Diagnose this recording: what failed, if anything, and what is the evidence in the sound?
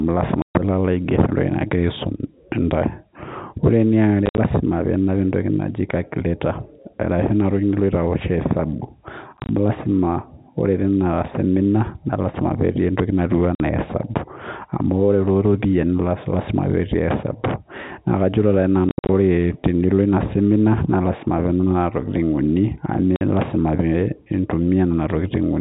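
The network stage failed: packet loss filled with silence. The speech drops to dead silence at 0.42–0.55 s, 4.26–4.38 s, 9.37–9.49 s, 13.55–13.60 s, 18.89–19.09 s and 23.16–23.21 s, with hard edges. Each hole lasts a whole multiple of 10 ms, which fits 10 ms packets. Unlike concealed loss, nothing is repeated or faded in. Unlike a buffer underrun, the gaps at 4.26, 9.37 and 18.89 s are broken runs scattered across the span.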